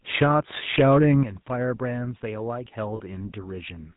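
Throughout, the speech passes through a GSM full-rate codec, which fits a 13 kbps link. It rebuilds the voice from sparse pulses and cuts everything above 4 kHz, so the sound is plainly buzzy and gravelly. At 1.23 s the microphone volume is stepped down, likely by call software reacting to a hot input, and voice and background suddenly drop by about 9 dB. From 2.96 to 3.00 s, lost GSM frames, consistent with two dropped frames, are filled by repeating the last good frame, which gives a brief rough, metallic ring.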